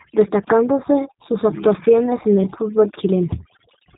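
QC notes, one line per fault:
Throughout: overdone noise removal. Bands near the noise floor are cut hard. The background drops and breaks up into twinkling specks.
Throughout: G.729 codec. Nothing passes above 3.8 kHz. Pulse-based rebuilding, consistent with 8 kbit/s, makes the speech plainly rough and synthetic.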